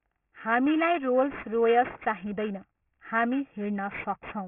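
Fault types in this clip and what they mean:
aliasing: Sibilants sound gritty and metallic throughout, as energy above 3 kHz folds back down, which fits resampling to 6 kHz without anti-alias filtering.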